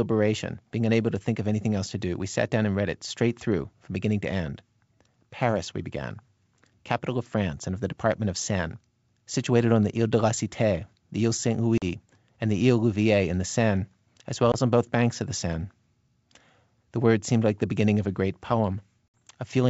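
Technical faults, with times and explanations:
11.78, 14.52 and 19.08 s, packet loss on an ADPCM call: abrupt 40, 20 and 60 ms silences, then slightly distorted speech while the G.722 decoder's predictor and step size re-align.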